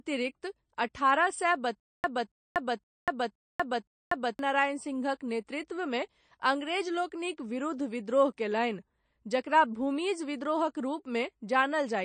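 Throughout the speech the sound is watery and swirly, with nothing above 9 kHz, a hallmark of MP3 compression at a starved bitrate, which fits roughly 35 kbps. The likely cause is an encoder short of bits, chopping off the treble and letting weak frequency lines flicker in and out.

From 1.80 to 4.39 s a stutter with silent gaps sets in. A 0.28 s burst repeats five times, each followed by about 0.24 s of dead silence, a steady cycle every 0.52 s. This likely comes from a stalled player replaying its last fragment at each retry, so the audio due in that span is lost.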